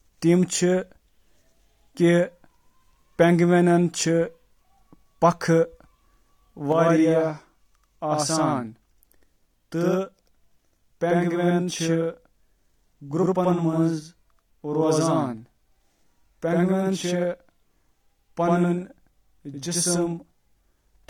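One channel runs about 85 ms late, fitting a 4096-sample buffer, and summing to mono gives this speech a channel delay (doubling) slap echo from 6.72 s onward.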